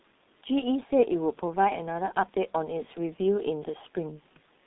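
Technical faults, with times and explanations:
Throughout, G.723.1 codec: speech sounds muffled and hoarse, consistent with roughly 6 kbit/s coding; the spectrogram shows smeared consonants and nothing above 3.8 kHz.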